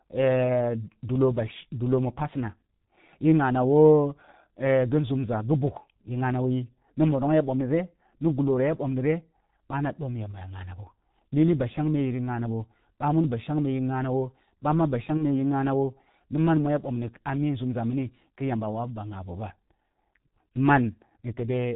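G.723.1 codec coding runs through the whole of this speech clip at 6.3 kbit/s, and the damage is heavy. With nothing passed above 4 kHz and a voice model refreshed only every 30 ms frame, the speech comes out muffled and hoarse, its consonants smeared together. VoIP packet loss concealed by the speech codec strikes from 15.17 to 15.23 s, where about 30 ms of audio went missing, which fits a single lost frame. The decoder filled the hole by extending its last pitch and filter at falling gain, leaving a brief, fading patch that stays weak or distorted until the decoder's state recovers.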